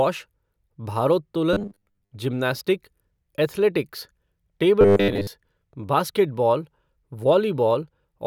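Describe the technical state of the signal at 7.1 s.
At 7.1 s the speech signal is intact, with no audible technical fault at that moment.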